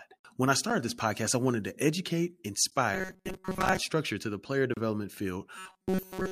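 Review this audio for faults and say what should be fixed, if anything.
Gap between stream segments: hard-edged silent holes of about 14 ms at 2.70 s, after "I wanted to educate", and 29 ms at 4.74 to 4.77 s, after "structure to the player". Segment timestamps leave gaps, which fits 2-second segments. No audio is lost.

Robotic sound from repeated short buffers: a rigid, metallic 188 Hz buzz from 2.94 to 3.80 s, ending just before "structure to the player", and again from 5.58 s to the end. The likely cause is starved playback repeating a roughly 5 ms buffer while most of the real audio is skipped.

Stitch segments with continuous timestamps and keep the playback buffer fed so it never loops stale audio.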